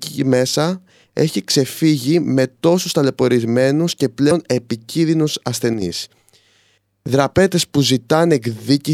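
Damaged data in the compressed stream appears from 4.27 to 4.32 s, right after "τόσους ταλαιπωρισμένους και": corrupted bytes make the decoder misread those frames and lose sync until it finds the next valid header, producing a brief disruption in the speech.

One channel drops out from 5.74 to 5.82 s: the level falls abruptly by about 6 dB for that short stretch, then returns. The likely cause is that one stereo channel went missing, so only half of the shared signal reached the mono sum.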